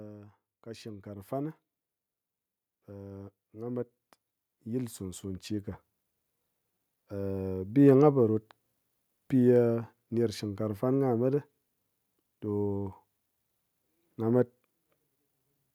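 A speech recording in which the level climbs steadily from 0.63 s to 7.88 s, the voice and the background noise swelling together by about 16 dB. That joint, gradual rise is automatic gain rising: the gain control judged the input too quiet and slowly turned it up.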